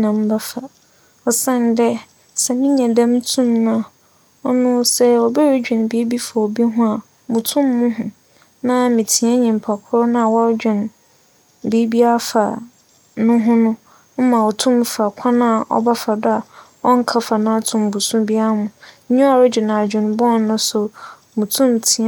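A speech recording with no technical faults to point to anywhere in the signal.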